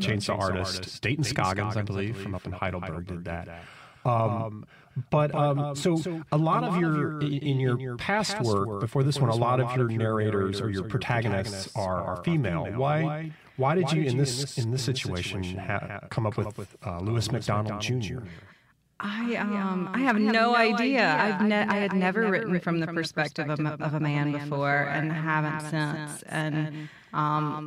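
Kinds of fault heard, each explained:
Doubled audio track: Throughout the speech, a second full-band copy of the same audio trails the original by roughly a fifth of a second, sitting around 10 dB lower. It has no decay tail or room colouring, so it reads as a distinct, flat repeat rather than an echo or reverberation. The likely cause is the signal being captured twice, once through a slower path, or an edit leaving two misaligned copies in the mix.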